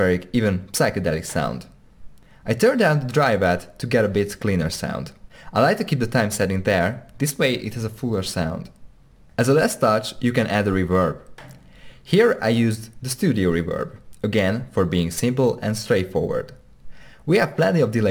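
From start to finish the audio carries the gritty fizz of crude rate conversion, which fits a change from 48 kHz to 44.1 kHz done by simply dropping the nearest samples instead of filtering. The dropped samples recur in a fixed pattern set by the two rates, producing shifted, inharmonic copies of the sound itself, roughly 25 dB below it. This is heard as an inharmonic buzz riding on the louder and brighter passages.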